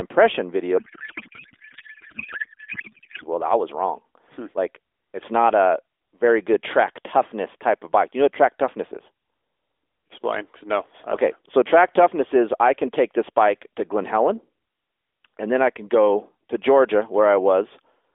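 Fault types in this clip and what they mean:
Codec payload misread: From about 0.78 to 3.25 s the speech turns into garbled noise and warble that barely tracks the talker, and it snaps back right before "well I was wrong". The decoder is reading frames whose bits are packed differently than it expects, so every field lands in the wrong place. With AMR-NB at 12.2 kbps that fits octet-aligned frames being read as bandwidth-efficient.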